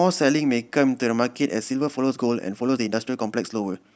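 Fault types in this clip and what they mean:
Time-stretched section: from about 1.48 s to the end the speech suddenly rushes along at 1.37 times speed, pitch unchanged, likely from software squeezing it to fit.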